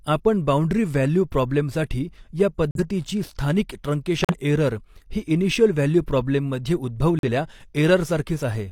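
Damaged compressed frames were rejected by the decoder and replaced with silence, a corrupt frame muted fault, so the speech drops abruptly into holes while timing stays intact. After "बाउंडरी वॅल्यु प्रॉब्लेमसाठी या" a gap runs from 2.71 to 2.80 s. Another runs from 4.19 to 4.35 s, just before "एरर ही इनिशियल व्हॅ्ल्यू". After "इनिशियल व्हॅ्ल्यू प्रॉ्ब्लेम मध्ये" the sound cuts out from 7.19 to 7.29 s. Each gap's length suggests two or three lost frames.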